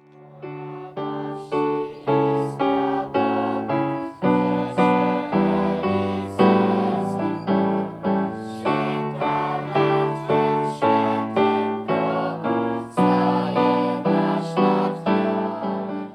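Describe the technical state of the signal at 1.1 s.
At 1.1 s the signal is intact, with no audible fault at that point.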